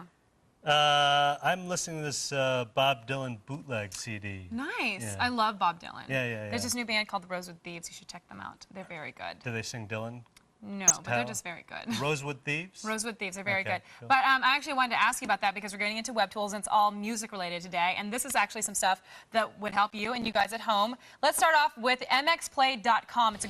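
Throughout, the audio sounds dull and gurgling, with a granular roughness and upper frequencies that flicker in and out. This is likely MP2 compression at a low rate, consistent with about 80 kbps, where starved sub-bands are switched off and the remaining ones are coarsely quantised.

From 10.84 to 10.92 s there is a brief burst of burbling in the sound. This is DAB burbling: bit errors slipped past error correction into the MP2 data across five frames, so corrupted samples put short blips of noise into single sub-bands.

From 19.68 to 20.45 s a gritty, tearing crackle rides on the sound, then stops. This is processor overload crackle. Around fifteen buffers of roughly 10 ms each missed their deadlines and were replaced by silence, leaving hard-edged gaps that merge into a rough burst.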